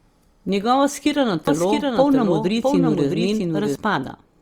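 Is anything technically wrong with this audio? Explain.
Yes. From 1.47 to 3.75 s the speech has a doubled audio track: a second full-band copy roughly 0.7 s behind, somewhat quieter, likely from a slower capture path. Unlike an echo or reverb, it carries no decay or room colour and switches on and off abruptly.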